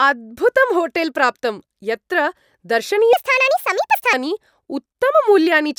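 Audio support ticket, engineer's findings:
Wrong sample rate, 3.13–4.13 s: speech high and hurried, 1.5x speed, pitch up 7 semitones; fits 32 kHz audio played at 48 kHz unconverted. Spectrogram: harmonics shifted upward, syllables time-compressed.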